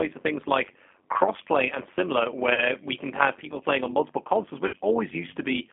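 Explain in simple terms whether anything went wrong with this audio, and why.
Overlap-add ripple runs through the whole clip: the sound was chopped into overlapping slices and rejoined unevenly, so the loudness pulses about a hundred times a second, giving a metallic buzz with extra tones around the voice.

The G.729 codec is also present throughout. This phone-call compression rebuilds speech from a simple model of the voice and passes only about 250 Hz to 3.4 kHz, so it sounds thin, slightly rough and synthetic.

VoIP packet loss concealed by the speech codec occurs at 2.54 to 2.65 s, after "like crossplay and similar" and before "we can have people", and again at 4.67 to 4.76 s, after "playing on multiple consoles". About 40 ms and then 60 ms of sound went missing. The decoder filled each gap by stretching the last sound into a fading buzz or noise, and the voice stays weak briefly afterwards.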